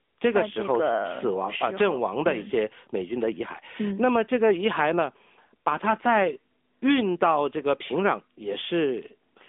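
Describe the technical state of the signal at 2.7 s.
AMR narrowband mobile codec at 2.7 s, as throughout: pulse-driven vocal-tract coding, fitting about 10.2 kbps, makes speech plainly buzzy and synthetic, with nothing above 3.7 kHz.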